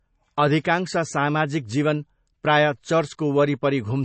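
Throughout the speech, plainly audible MP3 compression, likely at a low bitrate near 32 kbps, leaves a watery, swirly texture; a spectrogram shows a hard ceiling at 8.3 kHz with flickering gaps below. At 0.64 s, just before "सामाजिक जीवन प्रायः", pre-echo spreads hiss about 12 ms ahead of the attack, visible as a low noise smear preceding the waveform's sharp onset.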